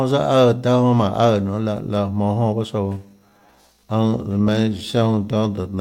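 Speech where, from 2.81 s to the end, there's a time-stretched section: pace drops to about 0.7x while pitch holds, sounding dragged, likely from stretch-to-fit software.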